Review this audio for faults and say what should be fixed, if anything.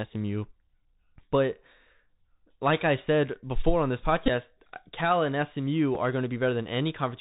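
Bluetooth CVSD headset codec, throughout: the speech has nothing above 4 kHz, s sounds are scratchy, and a granular hiss sits under everything. This fits a 64 kbps CVSD link, where one-bit up/down steps with adaptive size cannot track loud high-frequency energy. On a spectrogram, energy stops abruptly at a 4 kHz ceiling over a speckled noise floor. The waveform shows a stair-stepped, grainy texture on sibilants. To prevent it, switch the headset to a wideband profile (mSBC or LC3) instead of the narrowband CVSD path.

Bluetooth headset packet repeated, at 4.26 to 4.30 s, right after "said before on this": repeats are scattered over about 38 ms with the longest run around 15 ms, giving a brief buzz near 267 Hz. At 5.95 s a single repeat leaves only a small tick. The waveform shows identical 3.75 ms chunks copied back to back. On the spectrogram this appears as a short stack of harmonic lines spaced 267 Hz apart. 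To prevent it, keep the headset close to the phone and away from 2.4 GHz interference, and use a codec path with proper packet-loss concealment.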